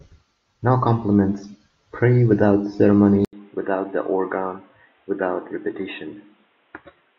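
At 3.25 s comes an 80 ms gap, then duller, quieter speech, with the spectrogram blank above 3.8 kHz: likely an input switched to a poorer device.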